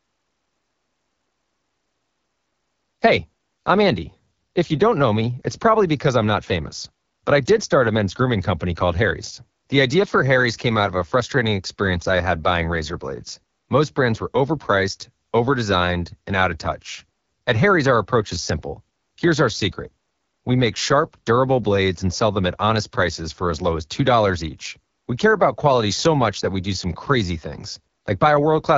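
From start to finish the speech carries AMR wideband (HD Voice) codec damage at 8.85 kbit/s, a low rate whose sparse pulse excitation leaves the sound rough and raspy throughout.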